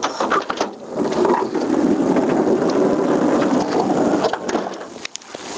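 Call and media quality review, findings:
Gain pumping throughout: gain ducks about 20 dB under loud events. Likely excessive mic gain into fast limiter. Waveform: loud and soft parts squashed closer in level.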